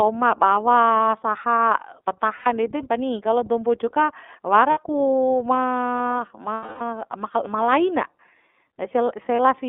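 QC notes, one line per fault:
Throughout: iLBC codec. The sound is confined to roughly 200 Hz to 3.5 kHz and has a plainly audible rough, slightly synthetic edge. Each frame's excitation is coded on its own at a low rate, which fits the 13.33 kbps, 30 ms frame mode.
2.36–2.47 s, 4.71–4.77 s, 6.54–6.81 s, 9.36–9.39 s: lost iLBC frames. The decoder fills about 90, 60, 270 and 30 ms by repeating the last pitch cycle with added noise. This gives a held, buzzy, breathy vowel, which fades during the longest gap before the sound snaps back at once.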